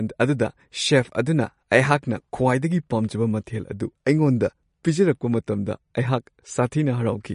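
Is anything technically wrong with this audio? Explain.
Yes. Throughout the speech there is plainly audible damage, likely from MP3 compression at a low bitrate; the sound fits something around 40 kbps. Short of bits, the encoder discards all content above 10.6 kHz and zeroes weak frequency lines, which flicker on and off between frames. The result is a dull top end with a watery, swirling texture and metallic chirps on s sounds. A spectrogram shows a flat ceiling at 10.6 kHz and speckled, patchy holes below it.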